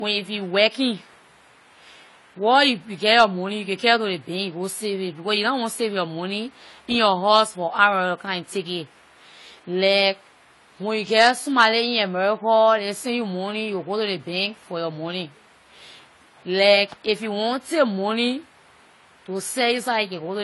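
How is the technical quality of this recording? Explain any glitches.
The recording is held back by one fault running through the whole clip: low-bitrate audio saved at a high bitrate. The speech has nothing above about 11.5 kHz and carries the smeared, swirly artefacts of heavy compression. Most likely, audio first squeezed at a very low bitrate, consistent with a low-rate AAC stage, was later re-encoded as a large MP3. The second pass can't restore what was discarded. Unlike a recording that is simply band-limited, this one has the codec artefacts baked in alongside the cut-off.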